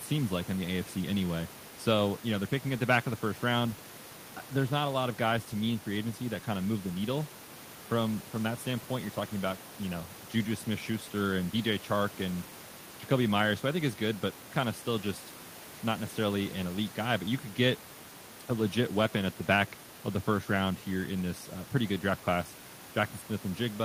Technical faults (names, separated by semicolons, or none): none